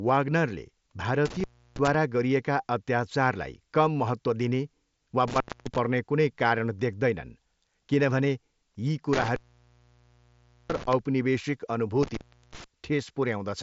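Intermittent contact breaks the speech four times. The first dropout spans 1.25 to 1.95 s, with the line open for about 0.32 s. The second runs 5.28 to 5.78 s, open about 0.25 s. The longest spans 9.13 to 10.93 s, open about 1.33 s. The last covers 12.03 to 12.64 s, open about 0.37 s. Each time the connection briefly fails. Crackle marks the edges, and faint hiss fills each gap. The band stops near 7.7 kHz, as the mSBC headset link passes it.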